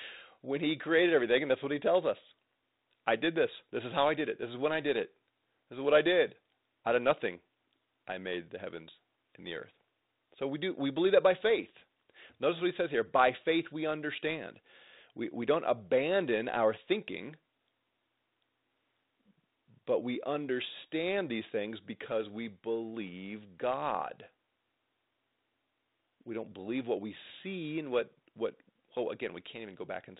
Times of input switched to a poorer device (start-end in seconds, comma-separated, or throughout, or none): none